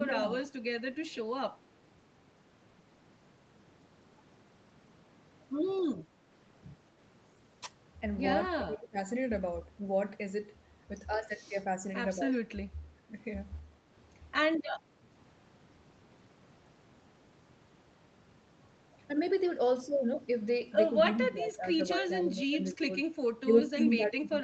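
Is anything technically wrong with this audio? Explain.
Yes, there are two recurring faults.

Speech suppressed in double talk occurs at 0.0–0.31 s, 8.53–8.97 s, 12.17–12.35 s, 21.15–22.89 s, and from 23.45 s to the end. The level dips by roughly 5 to 20 dB, likely because an echo canceller ducked overlapping talk.

Echo leak appears at 0.43–0.48 s, 5.95–6.04 s and 23.57–23.62 s. These are faint delayed copies about 200 ms behind the speech and roughly 20 to 30 dB down, likely loudspeaker pickup that wasn't fully cancelled. Nothing is heard above 8 kHz.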